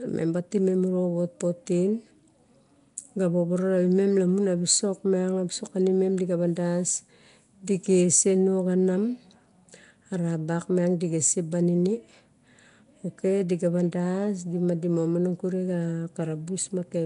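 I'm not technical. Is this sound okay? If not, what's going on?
No. From start to finish the speech sounds rough and hissy, with a smeared, underwater quality and nothing above 10.6 kHz. This is likely Nellymoser compression, an old Flash-era codec that throws away weaker sound detail and fills the gaps with noise.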